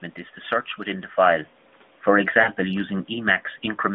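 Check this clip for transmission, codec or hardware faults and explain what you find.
Two faults are present in this narrowband speech: a slow automatic gain reduction and a short burst of lost AMR speech frames.

Automatic gain falling begins at 1.17 s, just after "to search within the", and continues to the end, easing the level down by about 4 dB. The gain control judged the input too loud or its background noise too strong for its starting gain. Unlike a talker moving away, the room noise sinks along with the voice.

Lost AMR speech frames occur from 2.42 to 2.49 s, a 40 ms stretch that fits two missing 20 ms frames. The decoder repeated the last good pitch and vocal tract settings at reduced gain, so the sound smears and dips briefly rather than cutting to a hard, silent gap.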